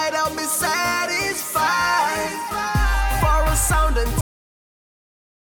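The audio has a cut-off end. At 4.21 s the sound stops abruptly in mid-flow and falls straight to digital silence, with no natural decay. The silence runs to the end. The final buffers were evidently never written or played back.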